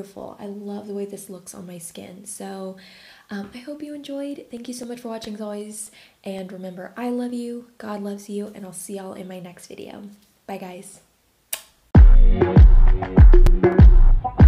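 From 4.31 to 6.64 s, CD scratch ticks come as ten clicks, about four a second. A blemish beats the error correction once per disc turn. The player patches or mutes a few milliseconds each time. Four more ticks follow from 12.95 to 13.73 s.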